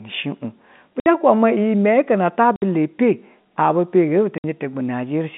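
At 1.00, 2.56 and 4.38 s the speech drops out for 60 ms each time: packet loss filled with silence, consistent with three lost 20 ms packets. Unlike concealed loss, nothing smears across the hole. The narrowband telephone-coded sound stops dead and restarts with hard edges.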